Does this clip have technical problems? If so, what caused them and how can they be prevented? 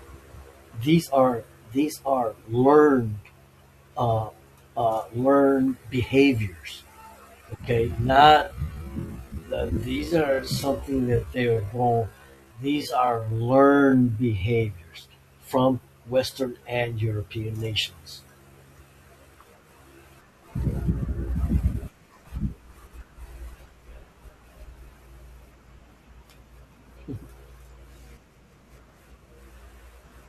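Yes. There is a time-stretched section from 7.96 to 14.6 s. The speech suddenly slows to about 0.6 times its normal pace, yet the pitch does not drop. The slowed stretch drags. The likely cause is software lengthening that part to fit a slot. It keeps pitch by repeating short pieces of the audio. To prevent it, edit the content or the slot length instead of stretching the audio this far.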